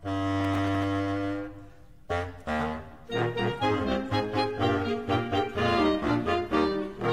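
A burst of gritty crackle runs from 0.40 to 0.84 s. This is processor overload crackle. The processor kept missing its deadlines for very short buffers, around 5 ms each, about fifteen times. Each miss replayed a sliver of old audio with hard edges. From 3.71 s to the end, quality drops suddenly with no gap. This is an adaptive stream at a lower bitrate. Nothing remains above 14.8 kHz. The sound points to a switch from a high-rate AAC stream to a low-rate HE-AAC one, around 20 kbit/s.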